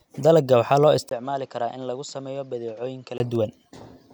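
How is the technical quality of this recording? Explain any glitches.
The recording has one glitch. From 1.09 s to 3.2 s, just after "waxaa loo", the speech turns dull and quieter. A 20 ms gap marks the change. This is likely an input switched to a poorer device. That narrower-band microphone passes nothing above 7.7 kHz. The level drops about 10 dB, and a faint new background noise sits well below the speech. At 3.2 s the fuller sound returns.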